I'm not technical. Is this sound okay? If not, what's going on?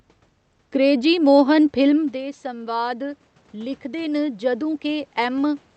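No. At about 2 seconds the talker moves away and the voice gets quieter. From 1.96 to 5.65 s you hear automatic gain rising. The system slowly turns its volume up to make up for it, so the voice and the room's background noise swell together over several seconds.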